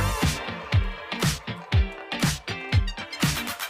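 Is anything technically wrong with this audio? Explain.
No, no technical faults.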